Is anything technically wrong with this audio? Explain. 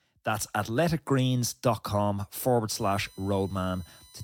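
Yes, there's USB whine from 2.74 s to the end of this speech clip: a steady tone built on 1 kHz, loudest at its 4 kHz harmonic and roughly 30 dB under the speech. It comes from the bus's 1 ms frame current leaking into the audio through power or ground.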